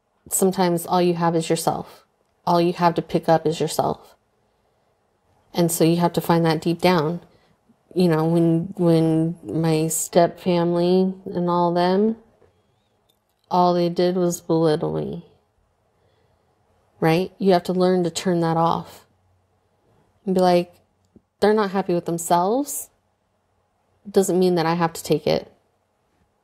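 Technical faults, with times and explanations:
8.78 to 15.66 s, time-stretched section: right after "you know when" the pace suddenly drops to about 0.69 times normal while the pitch holds steady, so it drags, likely from software repeating short slices to pad the length.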